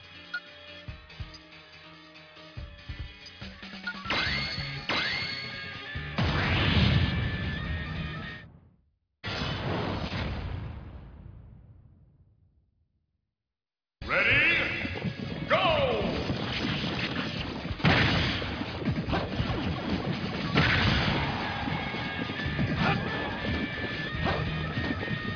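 No technical faults can be heard anywhere here.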